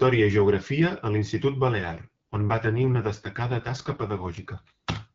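From 1.78 s to 4.50 s, the speech turns rough and raspy, then recovers. This is an AMR rate drop. The radio link weakened, so the network told the AMR-WB codec to spend fewer bits on the voice and more on error protection. The sound points to a step down from 12.65 to 6.6 kbit/s. The bandwidth does not narrow, and nothing drops out. The voice just sounds synthetic until the higher rate returns.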